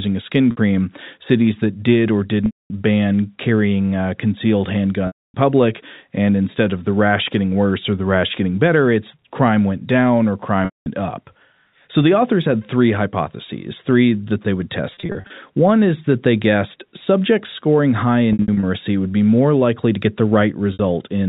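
Speech with packet loss with pitch repetition at 0.51, 2.46, 5.07, 10.65, 14.94, 18.33 and 20.73 s, lasting 60 to 270 ms. Gaps show as repeated, striped harmonics fading into blank spectrogram.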